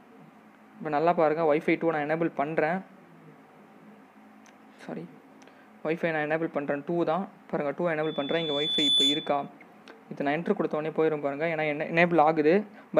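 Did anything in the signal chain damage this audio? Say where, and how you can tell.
Yes. Loudspeaker feedback squeal runs from 8.03 s to 9.49 s, in the acoustic loop between microphone and loudspeaker, ahead of any converter. A single 3.5 kHz tone rises out of the sound, swelling over roughly a second until it sits a few decibels above the material. That slow self-reinforcing growth at one fixed pitch shows the microphone re-amplifying its own loudspeaker output with loop gain above unity at that frequency.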